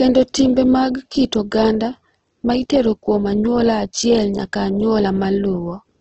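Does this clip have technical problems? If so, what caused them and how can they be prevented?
Yes. Throughout the speech, the sound is grainy and rough, with noise-like texture and nothing above 8.1 kHz. This is likely heavy Opus compression: band energy is kept but detail is filled with folded or noisy content, consistent with roughly 12 kbps. Prevent it by encoding at a higher bitrate.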